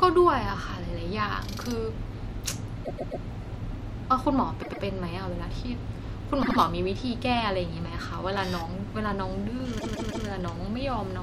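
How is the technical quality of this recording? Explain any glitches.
The speech is marred by four repeated-frames stutters, where a short block of compressed audio plays more than once: 2.84 to 3.23 s (130.6 ms block, three extra plays, adding 391.8 ms), 4.61 to 4.82 s (104.5 ms, two extra), 6.42 to 6.57 s (78.4 ms, two extra), and 9.78 to 10.26 s (156.7 ms, three extra, adding 470.2 ms). Each repeat is a mechanical stutter, and each one lengthens the recording.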